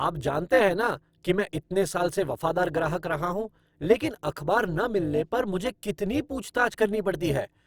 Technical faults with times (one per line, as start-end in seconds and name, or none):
0.00-7.67 overlap-add ripple